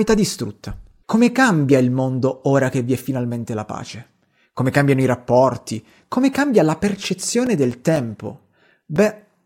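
From 6.97 s to 9.21 s, right after "cambia la", the speech picks up a steady train of ticks, one every 0.25 s, about ten in all, audible only where there is speech. These are periodic USB or driver dropouts. At that fixed interval something stalls the USB link or audio driver, and roughly 4 ms of audio goes missing each time, replaced by silence. Each gap cuts the waveform abruptly and produces a click.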